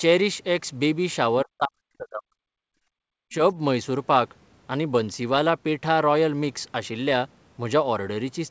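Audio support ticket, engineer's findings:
Speech level collapses by about 40 dB from 1.44 to 2.64 s, over roughly a second. Likely speech suppressed in double talk: echo canceller could not separate near talker from far-end echo during overlap, attenuated both.

Second short dip in speech, 3.24 to 3.42 s, again about 40 dB, about 0.2 s. Likely same mechanism: canceller treating overlapping near-end speech as echo and pulling the microphone down.

Brief hole in room tone at 2.92 to 2.96 s, 40 ms, about 37 dB down, then recovers. Background gated by the echo canceller: loudspeaker playback triggered hard suppression, released quickly. Top end stops at 8 kHz, consistent with the G.722 call path's band limit.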